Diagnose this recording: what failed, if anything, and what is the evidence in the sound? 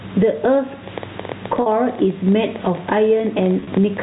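Gain pumping, at the analogue gain and limiter stage, runs through the whole clip. The gain swings by about 15 dB under each loud syllable. The likely cause is input gain set far too high, with a fast limiter clamping it. On a spectrogram the noise floor brightens between words and darkens at onsets, and the waveform envelope looks flattened.

A train of clicks, pointing to interference on the wiring or a faulty connection, runs from 0.88 s to 3.98 s. There are around forty of them at about 12 per second, irregularly spaced, and they peak roughly as loud as the speech, pauses included. A spectrogram shows thin vertical broadband lines; a waveform shows sharp, similar-shaped spikes.

Packet loss with pitch repetition, a network fault, is heard at 1.62–1.66 s, where 40 ms is bridged by a held, buzzy tone. From 3.60 s to 3.72 s, 60 ms of losses are scattered over 120 ms, with runs of up to 30 ms, which fits a loss of several short packets. 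Spectrograms show frozen, flat harmonic stripes. Waveforms show identical repeated cycles decaying, all within the 4 kHz telephone band.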